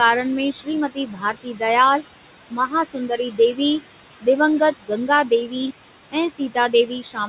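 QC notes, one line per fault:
throughout: noise suppressor artifacts. The room noise sits about 13 dB below the speech, and the suppressor pulls it down by about 17 dB between phrases, then lets it back up under the speech. The suppressor decides band by band and frame by frame what counts as steady noise. That makes the background pump. The G.711 call path carries nothing above 4 kHz.
0.53–0.68 s, 0.89–1.62 s, 2.51–3.59 s, 4.72–4.91 s, 6.12 s to the end: speech cut by the noise suppressor. In each span the suppressor mistook parts of the speech for noise. It turned them down with the background, by about 13 to 19 dB at the deepest. Only parts of each span are hit, roughly a few hundred milliseconds in the longer ones. Soft consonants and word endings there sound swallowed or fade out.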